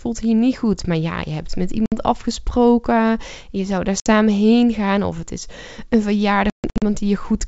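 At 1.86 s and again at 4.00 s the speech drops out in 60 ms holes. From 6.50 to 6.83 s, 240 ms of gaps are scattered over 320 ms, the longest lasting 140 ms. This is packet loss on an ADPCM call over G.722 wideband coding. Missing packets become silence, and the decoder's adaptive predictor and step size lose track of the sender's. Each hole therefore shows on a spectrogram as a sharp-edged blank column across the full band, and on the waveform as flat-line sections. Just after each gap, the returning speech has brief slight distortion before settling within some tens of milliseconds.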